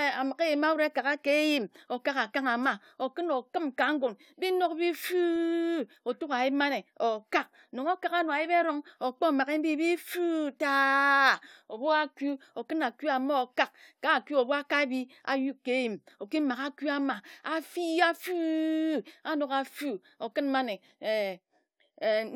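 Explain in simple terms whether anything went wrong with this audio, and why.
Nothing went wrong with this speech recording that a listener would pick up on. At no point does the audio change in a way that points to a technical problem, so there is no fault to explain.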